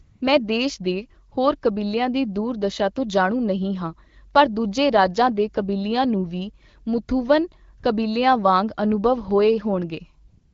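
AMR comfort noise appears at 0.01 to 0.21 s, 1.29 to 1.31 s, 7.79 to 7.83 s and 10.27 to 10.53 s. Each time, the phone treated the sound as silence and stopped sending speech frames, so the receiver substituted steady, smooth synthetic noise for the real background. At 9.31 s a DC step shifts the waveform's zero line and is heard as a low thump; the offset then decays away at a rate that fits a high-pass near 5 Hz.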